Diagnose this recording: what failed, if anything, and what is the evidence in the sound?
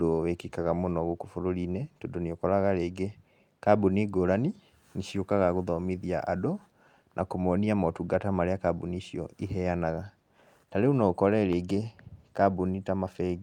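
Nothing in the speech stood out on listening that would point to a failure at any stage of the chain.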